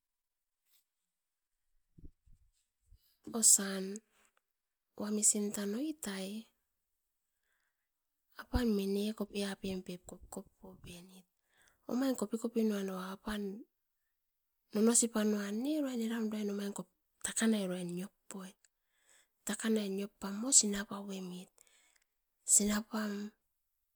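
Speech clip with nothing technically wrong with it.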